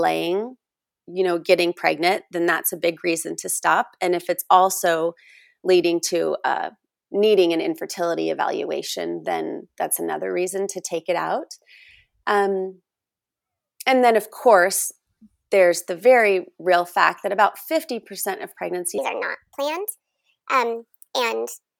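A speech recording whose final section, from 18.98 s to the end at 21.80 s, plays at the wrong speed, 1.35 times too fast, likely from a wrong playback clock. The voice jumps about five semitones higher and hurried. A spectrogram shows harmonics shifted upward, and the waveform looks compressed in time.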